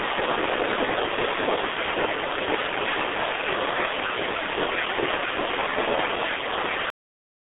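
From the first moment the speech carries the sound of the G.723.1 codec, heavily damaged. Nothing reaches above 3.8 kHz, and the line band sits between 300 Hz and 3.6 kHz, so the voice is muffled and thin at both ends. The hoarse, buzzy texture and smeared consonants fit a coder working at about 6.3 kbit/s on 30 ms frames, slowly refitting its voice model. That grainy roughness is what separates it from a plain telephone band-limit, which narrows the sound but keeps it clean.

At 6.90 s the audio shows a cut-off end. The final buffers were never written or played out, so the sound stops in the middle of a syllable and drops straight to digital silence, which holds until the end. There is no decay and no room tail, and no fade-down. A natural pause would carry some reverberation or breath into the gap, and a deliberate fade would taper. This stops mid-sound, which marks it as playback or recording that ended early.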